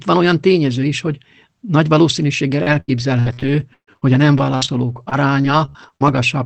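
From 2.63 to 6.24 s, after "is hogy nagy valószínűséggel", repeated packet loss (robotic sound) occurs. About a fifth of the stretch is concealed by extending prior sound, with gaps up to 132 ms, giving choppy speech with pieces missing.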